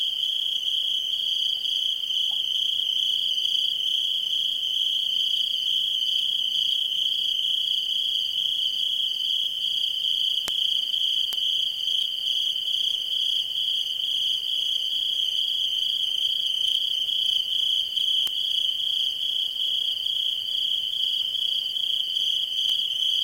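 At 10.48, 11.33, 18.27 and 22.70 s there's a bit error spike: a flipped bit throws a sample, or a few at 10.48, off by a power of two and back. Each is a lone broadband tick, peaking around -4 dBFS, the last near -10.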